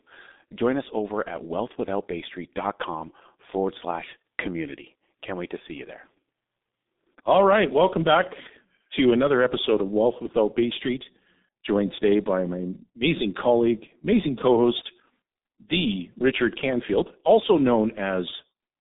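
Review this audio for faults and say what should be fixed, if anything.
The speech has been passed through a G.723.1 codec for its whole length, a low-rate telephony coder whose heavy damage points to its 6.3 kbit/s mode. The line band runs only from about 200 Hz to 3.7 kHz, and nothing survives above 3.8 kHz, so the sound is muffled and boxy. The coder's coarse, slowly updated model of the voice leaves it hoarse and smears consonants together. To prevent this, carry the call over a wideband codec at a higher bitrate instead of G.723.1.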